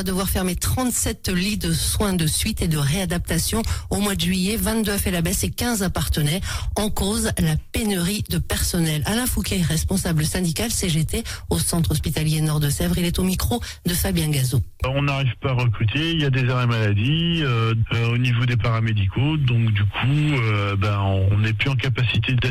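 No technical faults detected.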